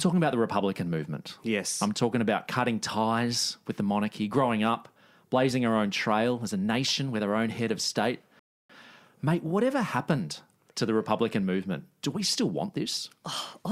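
At 8.39 s, right after "own head of state", the speech stops dead. Silence follows until 8.70 s. This is a rebuffering stall. The player used up its downloaded audio and had to wait for more data. When playback restarts, it picks up exactly where it left off. No speech goes missing. The gap just adds about 0.3 s to the clip. It sounds like an abrupt, unnatural pause in mid-flow.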